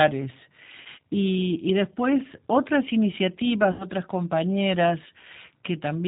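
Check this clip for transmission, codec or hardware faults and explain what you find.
Two faults are present: codec coloration across the whole clip and two short dropouts filled in by the decoder.

G.729 codec, throughout the 6 s of speech: nothing above 4 kHz gets through, and the voice has a plainly audible rough, synthetic edge. That fits the 8 kbit/s G.729 family. This coder does not send the waveform. It sends a vocal tract filter, a pitch predictor and a sparse pulse excitation for each 10 ms frame, and the decoder rebuilds speech from those parameters. Fine detail is lost in that rebuild, which produces the rough, slightly artificial texture heard here.

VoIP packet loss concealed by the speech codec, at 0.81–0.88 s and 3.72–3.87 s: about 40 ms of audio is missing at the first point and 80 ms at the second, consistent with two and four lost 20 ms packets. With no new data arriving, the decoder repeats its last pitch and filter and lowers the gain frame by frame. 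The result is a stretched sound that fades out. Because each frame depends on the one before, the speech stays weak and smeared for a short time after the gap.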